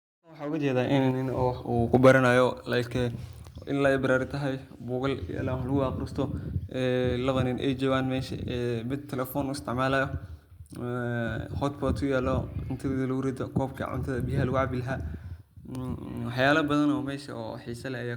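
From 0.09 to 0.56 s the loudest syllables carry a harsh, crackling edge with flattened tops, pushed about 9 dB past the limit across a noticeable share of samples. This is microphone overload, likely from input volume set too high for the converter. At 0.12 s, while that distortion is still going and as the sound fades in up to 1.37 s, the whole level drops abruptly by about 2 dB, then by about 5 dB at 1.11 s. These are the microphone volume stepped down, likely the call software cutting input gain after hearing clipping. A briefer crackle follows from 1.94 to 2.12 s, about 3 dB over, affecting only a small fraction of samples. It is a milder recurrence of the same overload, and at 2.13 s another sudden drop of about 2 dB follows, the gain reacting once more.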